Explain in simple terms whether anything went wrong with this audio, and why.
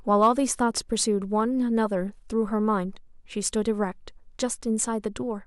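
Two brief crackles break into the speech, one from 0.13 to 0.28 s and a single click at 3.46 s. This is hard clipping: those loud moments were slightly too strong for the recording to hold, so their peaks were chopped flat, adding a rough edge.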